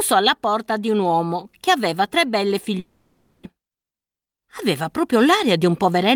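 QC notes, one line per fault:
2.79–3.47 s, long network dropout: the audio stops being real here, and the stretch that follows is the receiver smearing the last bit of sound into a fading buzz for about 0.66 s, with no gap of true silence. Likely a run of packets that never showed up. About 0.4 s of the original is simply gone when the audio picks up again, and the playout ends up roughly a fifth of a second later than before.
3.55–6.11 s, jitter buffer speed-up: right after the dropout the speech runs at about 109% speed with the pitch unchanged, so it sounds hurried all the way to the end. The receiver was holding more audio than it wanted after the hiccup and caught up by snipping out tiny pitch-period-sized pieces over and over, roughly a fifth of a second in total, which claws back that extra delay.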